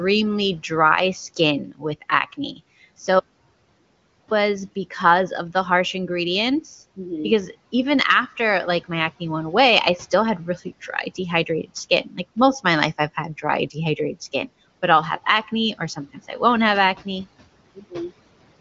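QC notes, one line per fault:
1.66–1.84 s, 2.32–2.60 s, 12.04–12.18 s, 17.75–17.94 s, speech cut by the noise suppressor: quiet speech was mistaken for noise and ducked by about 8 to 18 dB (deepest at the first), so those bits sound swallowed. The third comes just before "most of my life" and the last just after "I won't have acne".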